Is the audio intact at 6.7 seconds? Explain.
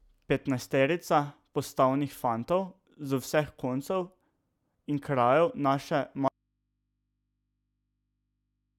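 No. At 6.7 seconds the clip is inside an audio dropout to a faint residue that begins at 6.28 s and runs to the end. The likely cause is a loss of the incoming signal while the path after the break stayed live, so the open input kept passing noise. The speech cuts out abruptly rather than pausing or fading, and the gap holds only a low mains hum, roughly 55 dB below normal level.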